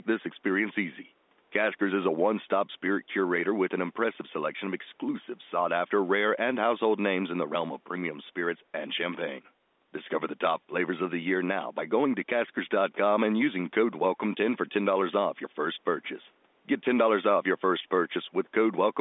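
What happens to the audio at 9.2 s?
At 9.2 s the speech runs on intact, with nothing breaking, dropping or distorting at that moment.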